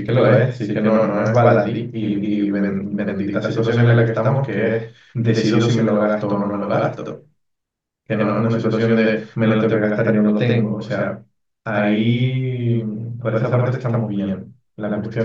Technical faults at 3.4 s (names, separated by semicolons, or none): channel delay (doubling)